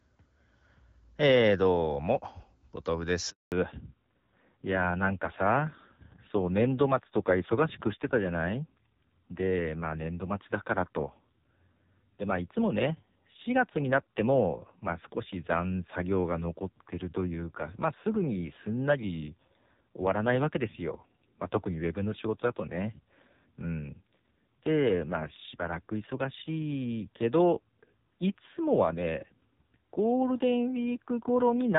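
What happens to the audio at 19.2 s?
At 19.2 s the audio is inside a fallback to narrowband that runs from 3.52 s to the end. The call has dropped from the HD Voice wideband path to a narrowband codec, likely a low-rate AMR-NB mode. Nothing remains above 4 kHz, so speech sounds dull, muffled and rougher.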